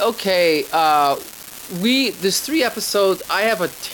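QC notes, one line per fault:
Throughout, unreliable data bit: a steady crackle and fizz runs under the speech and carries on through the pauses. One marginal data line flips its bit in a random share of samples, so each error lands as an identical spike, a step of about -16 dBFS.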